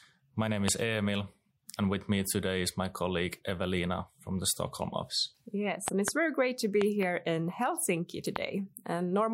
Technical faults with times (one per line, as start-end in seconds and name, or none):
0.68-0.70 loud pop
5.88-6.10 loud pop
6.81-7.05 loud pop
8.36-8.38 loud pop